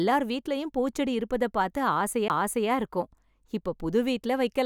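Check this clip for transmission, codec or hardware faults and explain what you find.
There's one hardware fault: a CD skip at 2.28 s. A knock or a disc flaw threw the laser onto a different turn of the spiral, so the player mutes for a very short instant and picks the speech up from another spot, leaving a tick and an abrupt jump.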